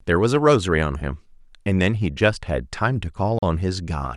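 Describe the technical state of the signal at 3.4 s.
At 3.39 to 3.43 s the speech cuts to about 40 ms of silence, most likely a Bluetooth stall: interference delayed packets, the headphones' buffer emptied and playback paused. Unlike packet-loss concealment, which fills the gap with smeared sound, this gap is silent.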